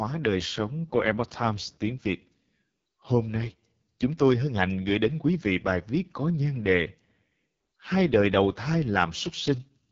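Throughout the clip, the speech has passed through the AMR wideband (HD Voice) codec at its lowest rate, with heavy damage that points to the 6.6 kbit/s mode. The pulse-driven vocal tract model is starved of bits, so speech sounds rough and raspy, and nothing remains above 7.5 kHz.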